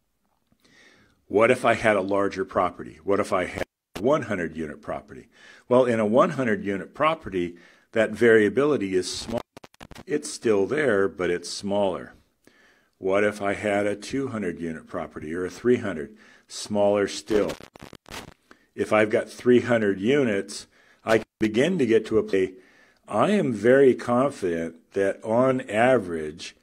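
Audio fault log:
3.58 to 3.99 s, 9.19 to 10.01 s, 17.31 to 18.32 s, 21.11 to 21.45 s: intermittent contact. The speech drops out for about 330, 450, 580 and 180 ms, with crackle at each edge and faint hiss during the gap. A loose connection is opening briefly.
22.29 to 22.34 s: stream segment skipped. The speech jumps abruptly ahead with a small blip. A piece of the programme is gone, likely because one stream segment failed to load.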